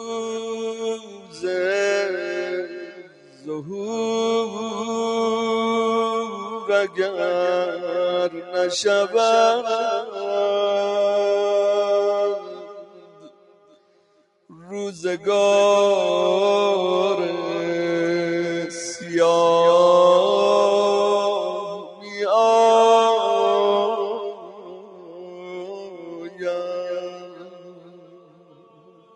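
A noise suppressor built for speech runs across the whole clip, applied to music or sounds it was never meant for. It treats steady tone and decay as noise. Level swings by around 10 dB as it clamps and releases. Attacks get through. Sustained parts and tails sink. The result pumps and thins.

The sound is cut by the noise suppressor in six places. From 0.73 to 1.43 s, it dips by about 12 dB for around half a second. From 2.86 to 3.47 s, it drops by about 12 dB. At 8.37 to 8.53 s there is a brief dip of about 7 dB. From 12.4 to 14.68 s, it sinks by about 12 dB for roughly two seconds. From 21.75 to 22.18 s, it falls by about 11 dB. From 24.18 s to the end, it drops by about 12 dB for some five seconds. Each time the held sound sags.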